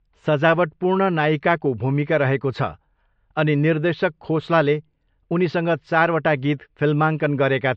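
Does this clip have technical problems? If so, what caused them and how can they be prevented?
Yes. Throughout the speech there is plainly audible MP3 compression damage, likely from encoding at a low bitrate, which fits about 48 kbps. With too few bits, weak frequency components are dropped and reappear from frame to frame, giving a watery, swirling texture. Unlike noise-reduction artefacts, this damage follows the encoder's frame-by-frame bit allocation rather than the background noise. To prevent it, keep a lossless master or encode at a much higher bitrate.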